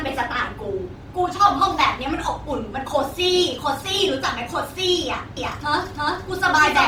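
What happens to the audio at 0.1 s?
At 0.1 s, and throughout the speech, the sound is grainy and rough rather than swirling, the mark of likely Opus compression in its music mode at a low rate near 24 kbps. Starved bands are filled with noise, so the full bandwidth reaching about 20 kHz survives without MP3-style holes.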